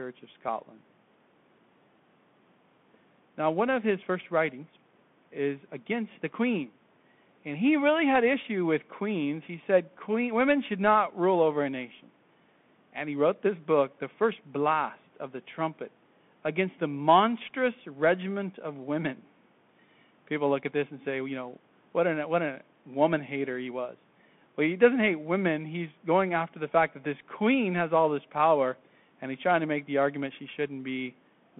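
The whole clip has passed through a Bluetooth CVSD headset codec, the narrowband link used for hands-free calls. It encodes the speech one bit per sample, which fits a 64 kbps stream, with each bit only nudging the level up or down while the step size adapts. The line band runs from about 150 Hz to 3.5 kHz, and nothing survives above 3.8 kHz, so the speech sounds boxed-in and telephone-thin. The codec damage is plainly audible, with s sounds turned scratchy and a granular hiss sitting beneath the speech.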